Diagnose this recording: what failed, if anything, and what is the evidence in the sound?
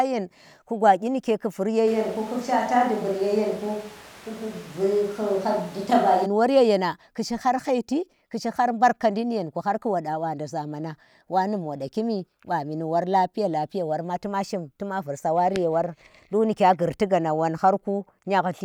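Switch to a distant microphone, 1.88 to 6.25 s, at the capture stage: the speech abruptly turns roomy and hollow, thinner in the bass, with background noise rising to roughly 20 dB below the speech at a similar level. It snaps back before "yenang ku shi", likely from the close microphone dropping out.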